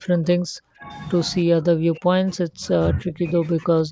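From the start to 0.88 s, again from 1.45 to 2.63 s, and from 2.93 s to the end, the speech dips and breaks into pieces, falling by as much as about 40 dB in the first two stretches and about 20 dB in the last. This is most likely speech suppressed in double talk: with both ends talking at once, the echo canceller mistook the near talker for loudspeaker echo and turned the sound down.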